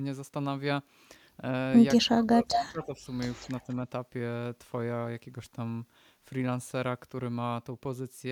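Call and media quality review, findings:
Speech ducks, 2.0 to 3.05 s, about a second affected in total, deepest dip around 25 dB. Likely speech suppressed in double talk: the echo canceller's suppressor can't tell near talker from far-end echo and attenuates everything.

Delayed copy of the speech, 2.51 to 2.58 s, trailing the original by 197 ms and nearly as loud. Likely echo leak: the far end's loudspeaker feeds its mic, and its canceller misses this during the overlap.

Second echo leak at 3.4 to 3.48 s, same 197 ms delay, far fainter, well below the speech. Likely the same path, residual echo slipping past that canceller.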